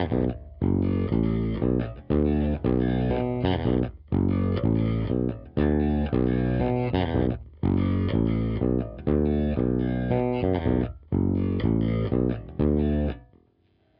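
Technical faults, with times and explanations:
No technical faults can be heard anywhere in the recording, and the signal stays continuous throughout.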